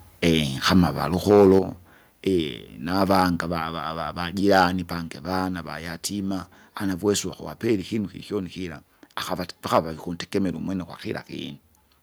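From 1.29 to 1.59 s the loudest syllables crackle and turn harsh: microphone overload, likely from input volume set so high that peaks, here about 6 dB beyond the converter's ceiling, have their tops sliced flat. It returns more briefly at 3.11 to 3.22 s (about 2 dB over), 4.52 to 4.64 s and 9.74 to 9.79 s (about 5 dB over each). Only a small fraction of samples are affected, so the grit rides on peaks rather than smearing everything. That distinguishes it from codec distortion, which colours quiet passages too.

At 1.59 s, immediately after that first distorted peak, the microphone volume stepped down by about 6 dB, likely because the call software reacted to the clipping by cutting device input gain. Voice and background noise fall together in a single instant drop and stay lower. A compressor or automatic gain control would dip and then recover, whereas this step holds, and its timing right after the overload points to it being a response to that overload.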